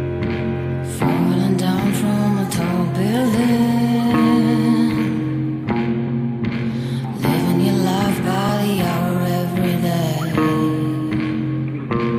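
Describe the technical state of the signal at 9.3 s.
At 9.3 s the signal is intact, with no fault audible at that moment.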